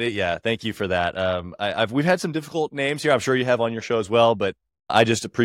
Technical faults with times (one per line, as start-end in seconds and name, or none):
none